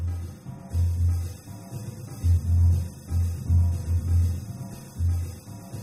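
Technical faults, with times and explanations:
No technical faults can be heard anywhere in the recording, and the signal holds steady with nothing that needs a time or an explanation.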